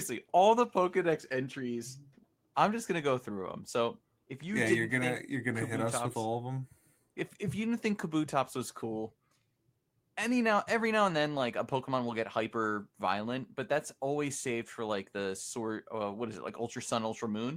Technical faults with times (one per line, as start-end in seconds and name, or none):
none